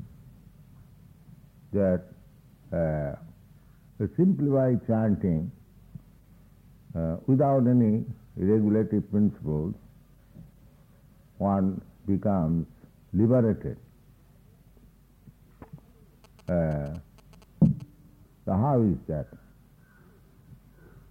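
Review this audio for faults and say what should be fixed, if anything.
From 16.24 to 17.82 s a galloping dit-dit-dit of short buzzes sits roughly 30 dB under the main sound, pulsing at about 217 Hz. These are GSM signalling bursts: a nearby 2G phone was exchanging short groups of radio bursts with its network, and the audio circuitry rectified that RF energy into audible buzz. Keep mobile phones switched off or in flight mode and well away from microphones, cables and preamps while recording.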